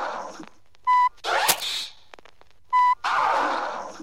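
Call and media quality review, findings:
Cable scratch noise, 1.48 to 1.68 s. A burst of dense, ragged scratching lasting 0.2 s, roughly as loud as the sound itself, so it sits right on top of it. Likely a worn cable, connector or control being moved. The contact resistance jumps around fast and throws uneven noise into the path. Worth reseating or swapping the lead to check.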